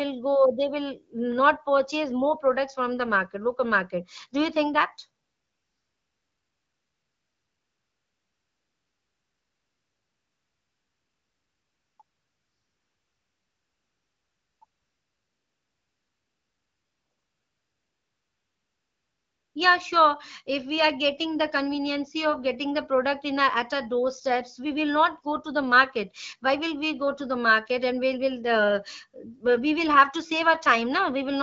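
AMR comfort noise switches in at 5.23 to 11.99 s, 12.03 to 14.61 s and 14.65 to 19.55 s. The phone decided nobody was talking, stopped sending speech frames, and the receiver filled each gap with smooth, steady synthetic hiss standing in for the real background.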